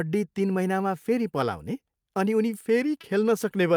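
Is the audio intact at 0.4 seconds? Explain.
Yes, the speech at 0.4 seconds plays through intact, with no dropout, click, distortion or other audible fault at that point.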